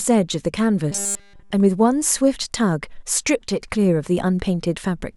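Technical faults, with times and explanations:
0.91 to 1.52 s, robotic sound from repeated short buffers: the speech turns into a stiff metallic buzz at 200 Hz that loosely follows the words. This is likely a 5 ms chunk looping while fresh audio ran late, with practically the whole stretch made of repeats.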